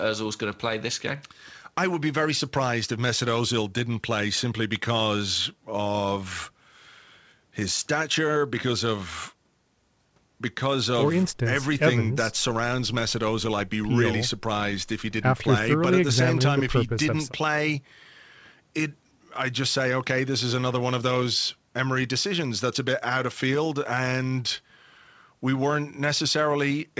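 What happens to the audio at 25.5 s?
Nothing goes wrong at 25.5 s: the speech carries on intact through that moment, with only the steady band limit of the call codec, which leaves nothing above about 8 kHz.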